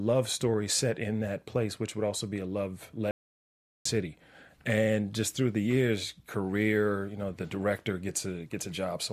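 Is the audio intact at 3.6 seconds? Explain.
No, 3.6 seconds falls inside an audio dropout to silence running from 3.11 to 3.85 s, right after "also be a love". The speech cuts off mid-flow into dead silence with no room tone for about 0.74 s. That's likely the input dropping out while recording carried on writing silence, so whatever was said then is gone.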